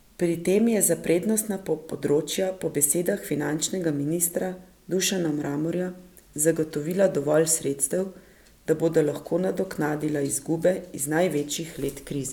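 Nothing technical goes wrong anywhere in this speech recording, so there's no fault here to point out.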